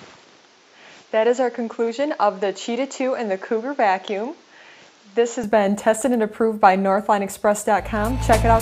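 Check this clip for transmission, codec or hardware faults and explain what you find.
One hardware fault. From 0 to 5.44 s the input has likely switched to a poorer device: its narrower band removes everything above 7.6 kHz, so the sound is dull, with faint extra background noise well below the signal, until it clears without any gap or level jump.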